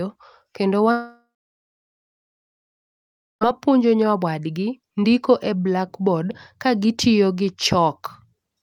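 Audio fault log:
0.91 to 3.43 s, long network dropout: the stream likely stopped delivering packets for about 2.5 s, so the receiver had nothing real to play and patched the gap itself. It first stretches the last speech into a short buzzing or hissing tail that fades, then gives way to about 2.16 s of silence. Speech resumes at 3.43 s with no catch-up, so everything said during those 2.5 s is simply gone.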